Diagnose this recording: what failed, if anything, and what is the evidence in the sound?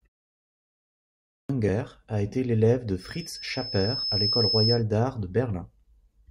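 Clipped start after a pause, 0.92 to 1.49 s: the speech that follows the opening 0.92 s of silence begins abruptly, with about 0.57 s of its onset missing. This is a playback-stage fault. The output device went idle during the quiet lead-in and needed time to wake and resynchronise, so the first part of the sound never reached the output.

Loudspeaker feedback squeal, 3.00 to 4.84 s, starting right after "a été l'élève de": a single tone at 5.2 kHz swells over roughly a second and a half until it sits about 5 dB above the speech. This failure is in the analogue acoustic path. A microphone is picking up the loudspeaker it feeds, and at 5.2 kHz the loop gain exceeds one, so that frequency keeps building on itself until the loop is broken.

Damaged data in a compressed stream, 4.02 s: a brief blip lasting under 20 ms cuts through the sound, landing inside the squeal. This is a codec or storage fault. 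Some bytes in the compressed data were corrupted, so the decoder misread or discarded the affected frame, lost sync, and had to search forward for the next valid frame header. The short artefact is the sound of that resynchronisation.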